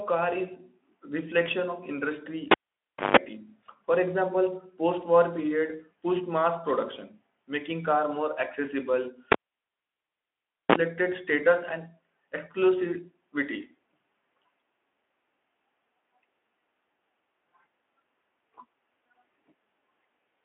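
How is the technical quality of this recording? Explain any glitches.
The speech has two dropouts, both from a cable pulled and plugged in while live. It all comes through a Speex-style narrowband line, with lightly hoarse texture and nothing above 3.8 kHz, consistent with a roughly 15 kbps setting.

The first dropout runs from 2.51 to 3.17 s. There's a pop, then about 0.61 s of near silence. As the plug goes back in, only the tip makes contact at first, and that open connection picks up about 160 ms of 50 Hz mains buzz before a second pop brings the sound back.

The second runs from 9.32 to 10.76 s and follows the same pattern. The silent gap is longer, about 1.39 s, and the buzz is only a 35 ms blip at 60 Hz, so the plug seated much faster this time.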